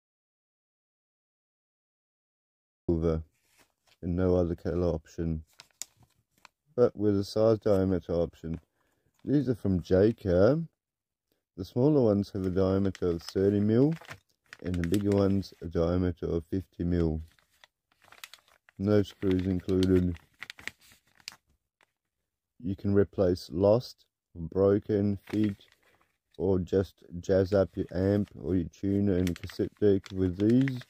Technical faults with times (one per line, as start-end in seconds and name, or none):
0.00-2.89 audio dropout to silence